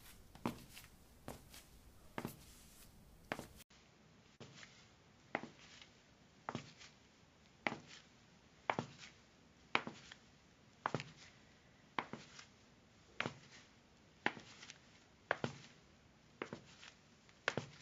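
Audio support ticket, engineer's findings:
From 3.62 s to end: sound turns duller and narrower, nothing above 7.3 kHz, faint new background hiss well below the signal, level about the same, 80 ms silence at the change. Likely an input switched to a poorer device mid-recording, with a narrower passband and its own noise floor.

4.35 to 4.44 s: roughly 46 ms of the preceding sound held and fading out, then a jump forward with about 40 ms missing. Burst of packet loss; the receiver's concealment stretched the last audio before playback resumed further along.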